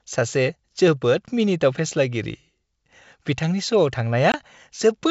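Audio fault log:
4.32–4.36 s packet loss on an ADPCM call: a hard-edged 20 ms silence, about a couple of packets. The speech then returns with brief slight distortion as the G.722 decoder's predictor and step size resynchronise within tens of milliseconds, unlike a clean dropout.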